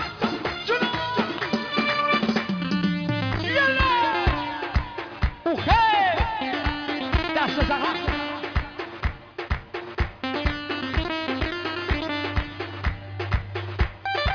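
No audible technical faults anywhere in the recording.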